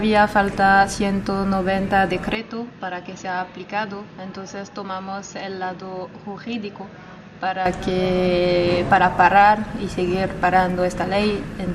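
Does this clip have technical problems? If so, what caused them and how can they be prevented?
Yes. From 2.35 to 7.66 s the sound turns dull and boxy, with nothing above 6.7 kHz, and drops about 10 dB with a faint new background noise, then clears again. There's no gap at either switch. The likely cause is the input switched to a poorer device partway through. Prevent it by locking the recording input to one device and disabling automatic switching to headsets or call profiles.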